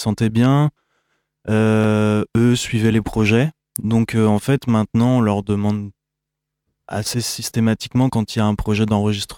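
No technical faults can be heard in the speech.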